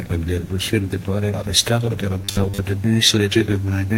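From 2.20 to 2.61 s the sound turns into a rigid, metallic buzz locked at 100 Hz: robotic sound from repeated short buffers. The likely cause is audio arriving too seldom, so a roughly 10 ms slice is looped to fill most of that stretch while the real audio is skipped.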